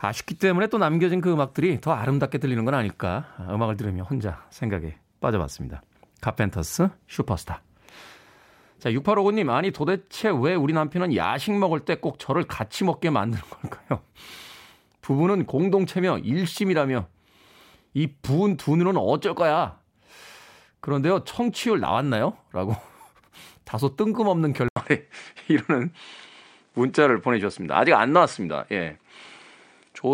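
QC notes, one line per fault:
24.68–30.14 s, input switched to a poorer device: an 80 ms gap opens at 24.68 s, and from there to the end the speech loses its top end, with nothing above 9.6 kHz, so it sounds duller and boxier than before. The level shifts by around 5 dB, and a faint new background noise appears, roughly 50 dB below the speech. A change of tone, level and noise all at once, after a brief dropout, points to the recording likely moving to a different, narrower-band input mid-take.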